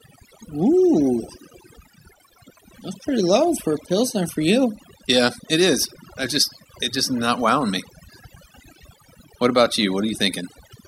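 Overdone noise removal runs through the whole recording. Heavy filtering gates bands near the noise floor. Gaps sound nearly silent with twinkly specks, and quiet parts of the voice are lost with them.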